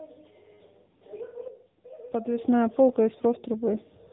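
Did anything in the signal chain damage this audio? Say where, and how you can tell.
Yes. The damage is at the codec stage: an AMR narrowband mobile codec, present for the whole clip. Nothing in the speech reaches above about 3.8 kHz, so sibilants sound dull and boxy. The voice also has a plainly audible buzzy, synthetic edge. That fits a low bitrate near 8 kbps. The codec rebuilds speech from a vocal-tract model excited by sparse pulses in 20 ms frames, and at this rate that model cannot follow the voice closely.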